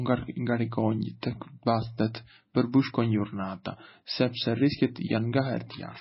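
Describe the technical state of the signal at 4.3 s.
At 4.3 s the speech carries heavy damage that is likely MP3 compression, present throughout: nothing above 5.6 kHz, watery swirling from dropped weak lines, fitting a bitrate near 18 kbps.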